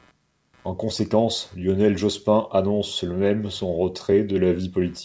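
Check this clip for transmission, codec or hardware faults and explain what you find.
Three faults affect the speech, heard through a call path whose ceiling around 8 kHz fits a wideband codec such as G.722 at 64 kbps.

Computer activity noise runs throughout: load changes on the machine shift the audio ground, producing a faint buzz pulsing roughly 150 times a second, about 40 dB below the speech.

Clock drift between sender and receiver also persists: the sender's clock runs roughly 2% slow, so the receiver's jitter buffer keeps draining and must be refilled.

Repeated timing corrections from 0.30 to 4.62 s follow from that drift. The receiver repeats short pieces, playing at 98% speed and adding around a tenth of a second, heard, if at all, as slight hiccups and uneven tempo.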